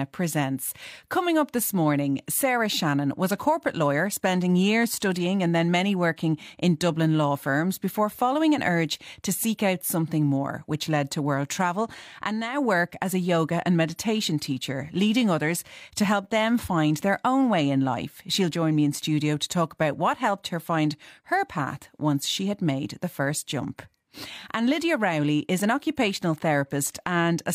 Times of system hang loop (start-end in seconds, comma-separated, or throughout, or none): none